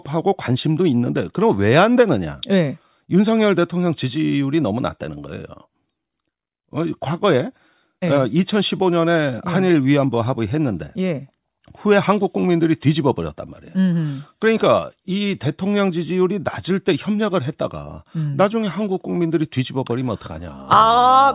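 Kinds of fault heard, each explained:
Nothing stood out on listening, so no kind of fault can be named for this recording.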